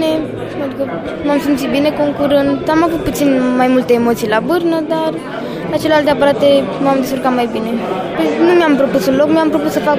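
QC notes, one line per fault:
No technical faults are audible in the signal, which stays continuous and stable in level and timing.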